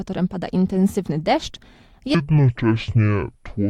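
From 2.15 s to the end, the sound drops to roughly half speed, deep and dragging, about ten semitones lower: a section at the wrong speed, likely played against the wrong clock.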